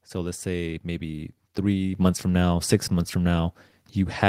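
A short speech recording with a microphone volume stepped up fault at 1.95 s, between "let's say maybe three" and "months from now six". The call software judged the input too quiet and raised the device's input volume in a single step, so voice and background jump up together by about 6 dB.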